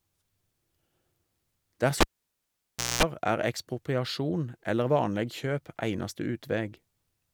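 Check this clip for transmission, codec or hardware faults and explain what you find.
One hardware fault: the cable was pulled and plugged in, from 2.01 s to 3.03 s. A live connector was yanked out of its socket and reinserted. Breaking the circuit causes a pop, then the speech drops to near silence for about 970 ms. On reinsertion only the plug tip makes contact at first, leaving the input open to mains pickup, so a 60 Hz buzz lasts about 220 ms. A second pop sounds as the speech returns, just before "er ekspropriasjon eller".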